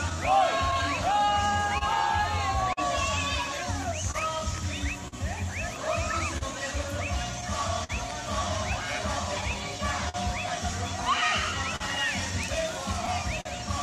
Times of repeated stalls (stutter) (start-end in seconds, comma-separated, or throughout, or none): 9.41-10.16